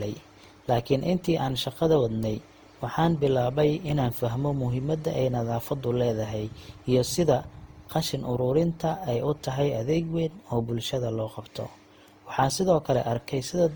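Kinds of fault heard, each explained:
Generation loss: throughout, the speech is swirly, smeared and hollow, with blurred attacks, likely from around seven successive Opus re-encodes, each quantising on a fresh frame grid. Unlike a single low-bitrate encode, the damage exceeds what 48 kbit/s would cause, and content still reaches 20.2 kHz.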